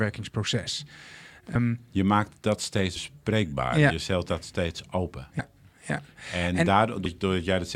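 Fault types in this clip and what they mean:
Compressed frames skipped: joins at 1.55, 2.96 and 5.39 s as the speech jumps ahead roughly 100 to 150 ms, fitting whole 32 ms frames dropped.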